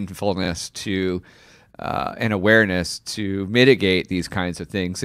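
Frames out of order at 0.43 to 0.48 s, just before "to uh and awareness": two adjacent 23.2 ms blocks, likely single frames, play swapped, giving a brief garbled flutter.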